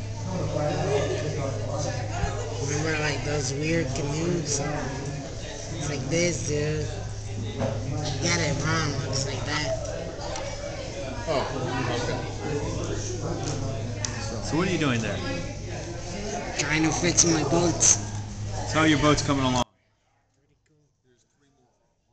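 At 19.63 s the sound cuts out abruptly and stays gone to the end, an audio dropout to a faint residue. The gap is not dead silence. A faint trace of the sound remains, roughly 35 dB below its normal level, which likely means the source feed broke while everything after the break stayed live. The instant cut and the leftover trace set it apart from a natural pause, a deliberate fade or a clean digital mute.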